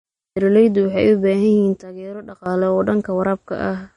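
Right from the start the whole clip carries codec damage you can plainly hear, most likely from MP3 compression at a low rate, something in the region of 39 kbps. With that few bits the encoder keeps throwing away weaker frequency lines, and they flicker in and out from frame to frame, which gives the speech that watery, swirly texture. There's also a hard ceiling, with nothing above 10.5 kHz, so the top end sounds cut off.

At 1.82 s the level suddenly drops by about 15 dB and stays down until 2.46 s, then comes straight back up. The speech and the background noise fall and rise together, which points to a sudden gain jump: the digital gain most likely changed from one sample to the next with no ramp, rather than anything changing at the source.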